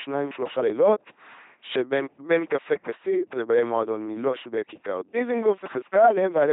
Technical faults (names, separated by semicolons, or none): LPC-10 vocoder